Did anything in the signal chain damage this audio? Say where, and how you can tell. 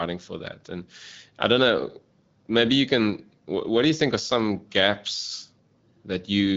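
No, nothing in the chain damaged this speech; its band stops near 7 kHz as an AMR wideband (HD Voice) codec's does, and its clarity fits a rate of about 12.65 kbit/s, where that codec keeps speech clear.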